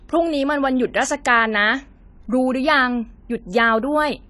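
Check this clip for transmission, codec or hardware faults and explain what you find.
One fault is audible: AAC compression, throughout. Coarse quantisation, likely from AAC-LC near 32 kbps, leaves the speech dull and smeared; a spectrogram shows nothing above 11.5 kHz.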